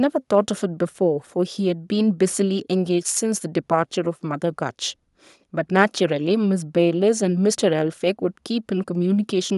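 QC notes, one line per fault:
No faults heard anywhere in the audio.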